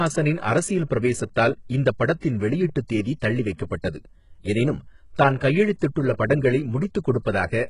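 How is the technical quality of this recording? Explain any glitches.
The speech is heavily compressed throughout, with a coarse, synthetic top end, and two attacks are smeared by pre-echo.

Across the whole clip the treble sounds gritty and metallic, with lispy s sounds and nothing above 11.1 kHz. This is likely HE-AAC compression: the upper band is rebuilt by copying lower harmonics upward under a rough envelope. The heavy damage points to a very low bitrate, around 12 kbps.

At 2.2 s a short hiss lasting about 28 ms runs ahead of an attack, and at 3.82 s a similar 22 ms hiss does the same. Both onsets sound soft. This is pre-echo: the codec spread quantisation noise, sized for the loud attack, across its whole block, so the noise leaks into the quiet moment before the onset.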